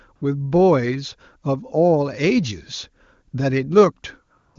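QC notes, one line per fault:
0.15–0.21 s, 3.31–3.33 s and 4.37–4.55 s: AMR comfort noise. In each gap the sender's voice activity detection judged the input silent and stopped sending speech frames, for 60 ms, 20 ms and 180 ms respectively. The decoder filled the space with synthetic noise built from a coarse description of level and spectrum, so the real background gives way to a smooth, steady hiss that switches in and out at the gap edges, set against clear wideband speech.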